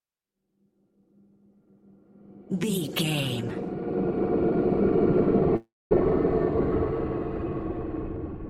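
From 5.56 to 5.93 s the sound smears into a fading buzz, then silence, resuming with 300 ms lost, likely a long network dropout.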